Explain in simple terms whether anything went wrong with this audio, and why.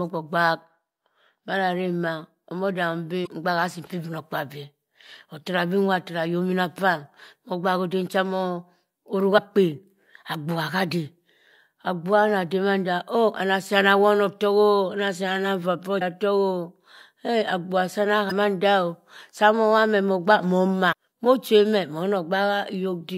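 Yes. Parts of the compressed speech stream arrived damaged, so the decoder couldn't read those stretches, lost its place and had to hunt for the next readable chunk. This damaged data in a compressed stream is heard as five brief chirps or blips, each lasting about 45 ms: at 3.23–3.27 s after "madaremma omo dahum", 9.34–9.39 s after "cha mosim oruk", 15.98–16.02 s, 18.28–18.32 s, and 20.89–20.93 s after "mowobha meh mogbak moh".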